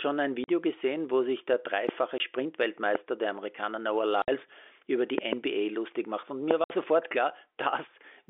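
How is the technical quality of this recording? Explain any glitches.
The recording has two recurring faults, dropouts and pops, over a narrowband telephone channel limited to roughly 300 Hz to 3.5 kHz.

Packet loss filled with silence occurs at 0.44 s (40 ms, just before "gesehen wo sich der"), 2.18 s (20 ms), 4.22 s (60 ms, just before "über die") and 6.64 s (60 ms). Lost packets were replaced with silence, so the speech cuts out abruptly with hard edges. The gap lengths fit 20 ms packets.

A loud pop is heard at 1.89 s, right after "gesehen wo sich der", and again at 2.95 s, 6.51 s, and as a double pop between 5.18 and 5.35 s. Peaks stand about 15 to 20 dB above the speech. The likely cause is a voltage transient from a connector, switch or driver glitch, heard as a sharp crack over continuing speech.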